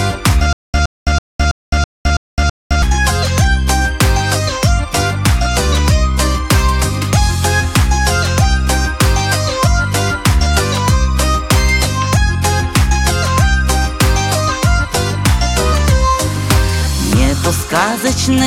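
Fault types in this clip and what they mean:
Stutter with silent gaps: the playback or stream most likely stalled and retried repeatedly, replaying the last short fragment each time before running dry. A burst of about 116 ms repeats 7 times, each followed by roughly 212 ms of digital silence, giving an even cycle of about 328 ms from 0.53 s to 2.82 s. The audio that belonged in that stretch never plays.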